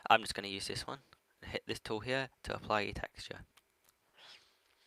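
At 2.99–3.01 s and again at 3.03–3.05 s, a lost packet was rebuilt from error correction. Each 20 ms stretch was recovered from the low-bitrate redundant copy carried in the following packet, so nothing drops out. Those frames come through coarser and noisier. A third 20 ms rebuild at 3.33–3.35 s has the same rough character.

Between them, at 3.07–3.13 s, comes the first short concealed packet loss. About 40 ms never arrived in time, and the receiver filled the hole by extending the preceding sound, either pitch-continued or as shaped noise, before crossfading back into real audio. The result is a brief smear or wobble. The same happens at 3.47–3.53 s, 3.97–4.03 s and 4.09–4.15 s, each a 40 ms fill, and any short transient falling inside those windows can disappear.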